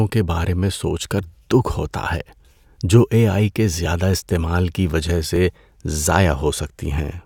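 At 3.86 s, between "جو اے آئی کے" and "استعمال کی وجہ", and again at 5.36 s, just after "استعمال کی وجہ", the speech jumps ahead by a few milliseconds with no gap. The likely cause is a dropped buffer (overrun), where overwritten samples were lost and the two sides were spliced together.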